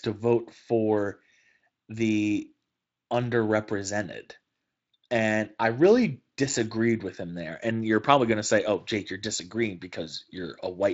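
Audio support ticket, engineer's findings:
No faults found in this speech clip. The Speex path is audible only as a light coding texture and a top end that stops at about 7.5 kHz, consistent with a mid-to-high quality setting.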